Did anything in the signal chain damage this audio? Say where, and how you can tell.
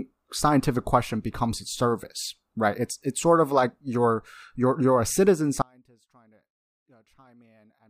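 Yes. Right after "you're you're a citizen" at 5.62 s, the speech cuts out abruptly to an audio dropout to a faint residue that lasts to the end of the clip. Only a faint trace remains, roughly 35 dB below the speech. On a waveform the envelope falls instantly to a thin sliver. A spectrogram shows a hard vertical edge into near-empty frames. The path after the break stayed live, so the loss is likely an interrupted analogue connection upstream.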